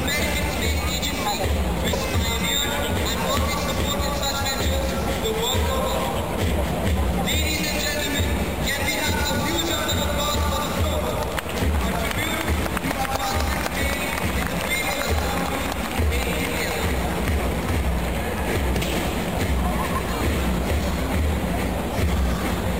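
A brief glitch cuts through the audio from 1.92 to 1.95 s, lasting only about 30 ms before the sound carries on. This is damaged data in a compressed stream. A short run of bytes in the encoded file was corrupted, so the decoder could not read the affected frame properly. It lost its place in the stream and resynchronised on the next valid frame header.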